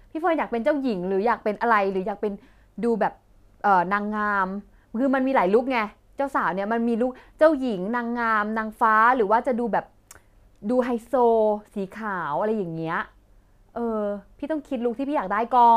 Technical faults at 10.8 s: sample clock jitter

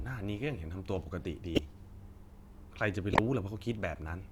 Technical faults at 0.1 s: none

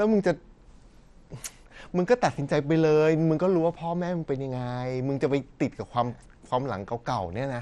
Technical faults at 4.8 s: MP2 compression

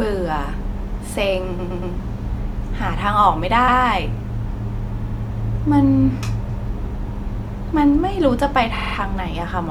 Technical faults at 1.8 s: repeated frames

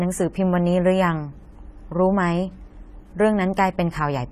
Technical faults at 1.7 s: AAC compression

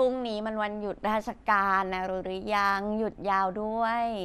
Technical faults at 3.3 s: MP2 compression

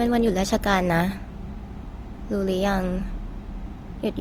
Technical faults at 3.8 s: Opus compression

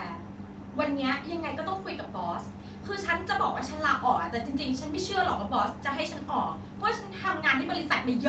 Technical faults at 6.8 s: none

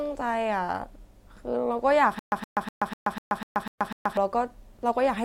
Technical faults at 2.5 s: stutter with silent gaps

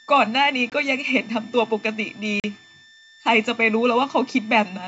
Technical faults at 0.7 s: switching supply whistle; packet loss on an ADPCM call

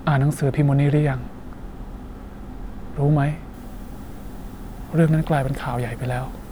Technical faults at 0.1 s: none

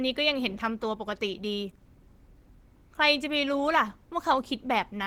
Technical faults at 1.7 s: Opus compression

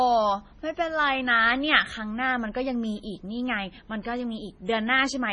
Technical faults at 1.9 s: MP3 compression

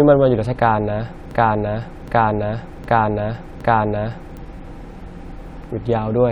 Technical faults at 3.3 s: broken-record loop

